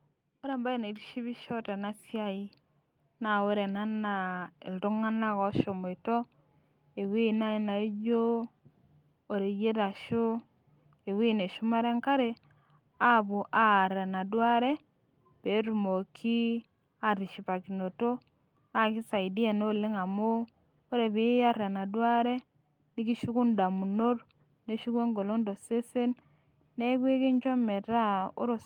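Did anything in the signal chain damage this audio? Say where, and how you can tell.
Yes, at the call-processing stage: automatic gain rising from 0.42 s to 6.06 s. The controller judged the input too quiet and slowly lifted its gain by about 8 dB. Unlike a speaker moving closer, the background noise swells along with the speech.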